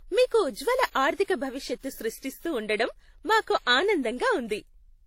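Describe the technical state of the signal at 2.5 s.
At 2.5 s the speech carries the same layered codec smear heard throughout, with nothing above about 16.2 kHz. That points to likely transcoding between lossy codecs, something like a WMA encode re-squeezed through low-rate HE-AAC, each stage adding its own artefacts on top of the last.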